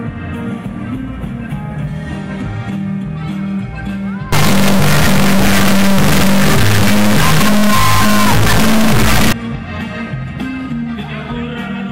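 Integer read as float runs from 4.33 to 9.33 s. The sound points to 32-bit integer samples decoded as 32-bit floats, so values land near zero or far out of range, giving an extremely loud, buzzing square wave that drops to silence in quiet passages.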